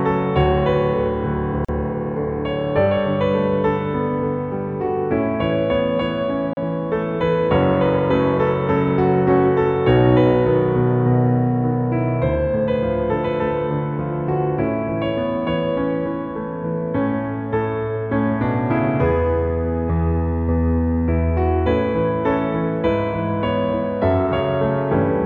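At 1.65 to 1.69 s and again at 6.53 to 6.57 s the sound drops out for about 39 and 36 ms: gaps at a join of encoded pieces, where encoder delay and end padding were left in. Each is a blank vertical stripe with smeared edges, then resumes seamlessly.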